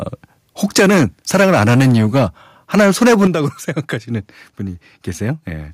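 Between 0.76 and 1.05 s the loudest syllables turn harsh and crackly. That's microphone overload: the input was likely set too hot, pushing peaks about 7 dB past the converter's ceiling, so the tops of a good chunk of the waveform get sheared flat. At 0.79 s, right inside that burst, the microphone volume steps down by about 2 dB, a small sudden dip in level, likely the call software reacting to the clipping. It isn't enough, though. The same gritty overload comes back from 1.34 to 2.23 s and again from 2.74 to 3.27 s, each time about 6 dB over. At 3.27 s the level drops more decisively, a step down of about 8 dB that pulls the voice and the background down together in one noticeable jump.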